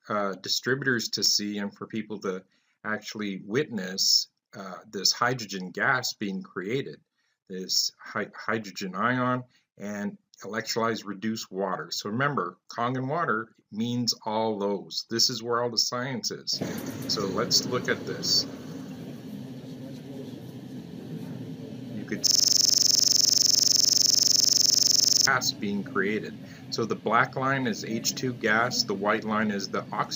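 From 22.27 s to 25.27 s there's a system hang loop: the machine froze while the audio hardware kept replaying one 42.67 ms chunk of its ring buffer, which fits a 2048-sample buffer. That chunk repeats about 70 times at 23.4 Hz, giving a rapid, rattling stutter.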